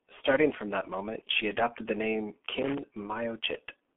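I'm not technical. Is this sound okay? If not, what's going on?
No. The whole clip has passed through the G.723.1 codec, an old internet-phone format that discards the upper frequencies, so the speech sounds muffled, hoarse and smeared. From 2.51 to 2.78 s, a loose connector crackle adds a burst of scratchy noise as a bad contact rapidly cuts the signal in and out.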